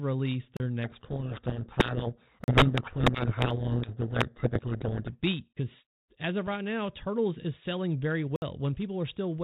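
A brief hole at 0.57 s marks the first block of digital silence: about 33 ms of samples dropped to zero with no fade, so the sound snaps off and back on. Most often that means the output buffer was not filled in time.

From 0.84 s to 5.14 s the speech is buried under harsh, grinding distortion. This is a codec payload misread. The telephone-band G.726 ADPCM stream, whose narrow sound outside this stretch fits a 32 kbit/s link, is decoded with the bits of each code word in the wrong order. The decoder therefore follows the wrong prediction differences and turns clean speech into rasping noise until the packing agrees again.

Inside that stretch, a 40 ms block of digital silence at 2.44 s adds another short gap. A longer 60 ms dropout at 8.36 s is heard as a hole.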